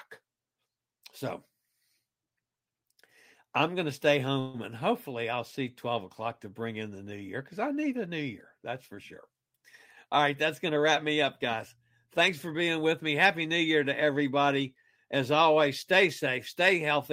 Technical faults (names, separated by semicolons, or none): call audio freeze; jitter buffer speed-up